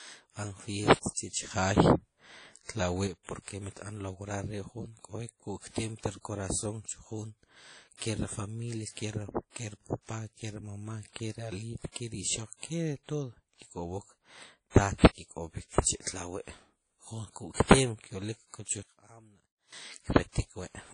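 Right from the start the whole speech track carries a washy, ringing quality, plainly audible, with hiss that swells and recedes along with the talking, and nothing above about 10.1 kHz. That's the signature of WMA compression, likely at a low bitrate around 32 kbps: a transform codec smears its quantisation noise across long blocks and drops weaker spectral detail, so transients blur and the top end disappears.

At 1.51 s there's a sudden gain jump. Level leaps up by about 6 dB, background noise included, and stays there until 3.07 s, dropping back just before "mit b'an lograr". That instant step with no ramp likely comes from a gain setting or bit shift applied mid-stream. Then at 18.83 s a second sudden gain jump, this time down by about 22 dB, makes everything nearly vanish until 19.73 s before snapping back. The abrupt, unramped change points to the same likely cause.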